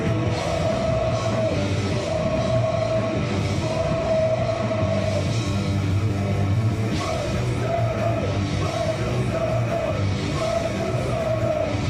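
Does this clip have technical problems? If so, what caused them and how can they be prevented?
No, there are no technical problems in this audio. With nothing gone wrong, there is no cause to trace and nothing that needs preventing.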